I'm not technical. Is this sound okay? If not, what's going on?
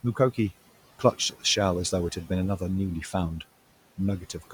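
No, not quite. There are noise suppressor artifacts running through the whole clip. A cleanup filter keeps turning the background noise down between words and letting it back up under them.

There's also speech cut by the noise suppressor in three spots: 0.03 to 0.38 s, 0.99 to 1.44 s, and 4.2 s to the end. The filter mistook small pieces of speech for noise and turned them down, so a few sounds there, adding up to a fraction of a second each time, come out swallowed and faint. The room's own background noise underneath is just the space itself, not a fault.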